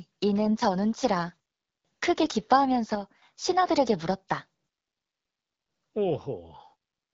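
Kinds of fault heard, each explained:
AMR bit errors: Corrupted, weakly protected codec bits misplace the excitation pulses. Near 0.46 s and 2.2 s the speech turns briefly hoarse and gargly.
One channel drops out: From 2.95 to 3.22 s the level falls abruptly by about 6 dB, likely from one stereo channel vanishing before mono summing.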